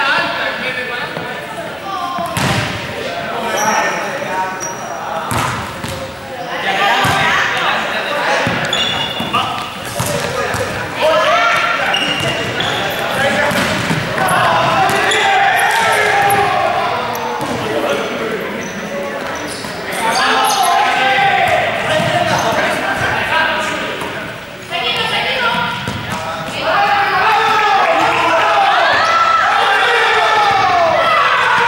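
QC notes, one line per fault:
No faults found.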